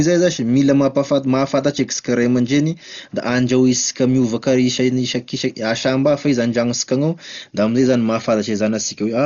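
Throughout, the speech sounds dull, with nothing above 7 kHz and a rough, fluttering noise around tones, likely heavy Dolby Digital compression at about 40 kbps.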